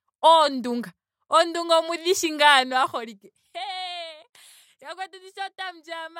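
From 2.63 to 3.66 s, zipper noise rides on the speech. The level drops by about 15 dB in coarse unsmoothed steps, roughly thirty per second. Each step makes a tiny click. Together they sound like a fast ticking zip over the fade.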